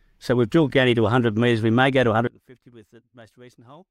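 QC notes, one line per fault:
2.27–3.9 s, one channel inverted: right after "may go to" the speech collapses, dropping by about 26 dB into a faint remnant. The likely cause is reversed polarity on one stereo channel, so centred speech cancels when the channels are summed to mono.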